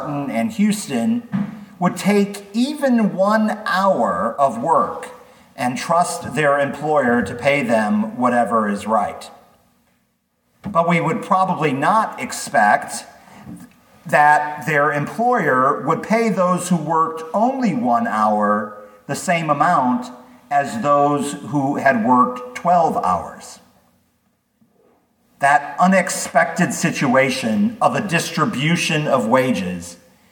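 No technical faults can be heard anywhere in this recording.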